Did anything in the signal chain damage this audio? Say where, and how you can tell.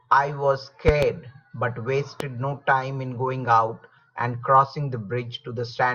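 Yes. A loud pop sits over the speech: a double at 0.88–1.05 s and a single at 2.20–2.23 s. Each is likely a voltage spike in the analogue wiring.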